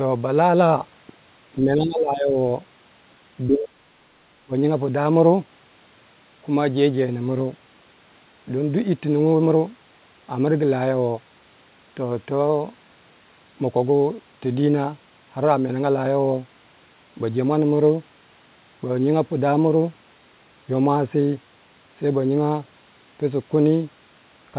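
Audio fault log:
1.63–2.36 s, 3.47–3.97 s and 4.44–4.54 s, speech suppressed in double talk: the speech sinks by about 15 dB in the first stretch, nearly vanishes in the second at roughly 40 dB down, and briefly ducks by about 25 dB in the third. The likely cause is an echo canceller facing talk from both ends at once; unable to tell the local talker from loudspeaker echo, it attenuated everything.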